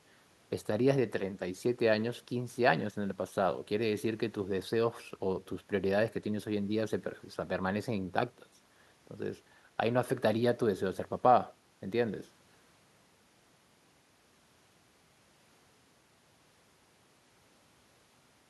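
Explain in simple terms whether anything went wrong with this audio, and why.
Nothing went wrong here: the recording is technically sound, and at no point does the signal break up, drop out or get distorted.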